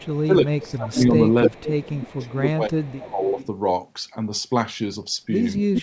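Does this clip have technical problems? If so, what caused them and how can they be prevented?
Yes. There is an echo leak: a copy of the speech returns 300 ms late at 0.0–0.26, 0.62–0.74, 1.44–2.28, 2.8–3.46 and 5.74–5.82 s. It ranges from about 25 dB below the speech to about 5 dB below it at the end. The likely cause is a loudspeaker echo canceller letting its pickup through. A headset or better echo cancellation would prevent it.

Between 0.26 and 3.38 s, the speech dips by up to about 20 dB for roughly two seconds in total. This is speech suppressed in double talk, likely from the canceller ducking while both sides talked. Better double-talk detection would prevent it.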